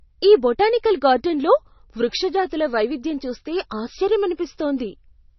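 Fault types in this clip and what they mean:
MP3 compression: throughout the clip the speech sounds dull and watery, with nothing above 5.9 kHz and heavy swirling damage. This is the likely result of MP3 encoding at a rate that fits about 26 kbps. Starved of bits, the encoder removes all treble above a fixed cut-off and drops weak frequency lines that flicker on and off from frame to frame, so s sounds turn metallic and chirpy and consonant onsets smear.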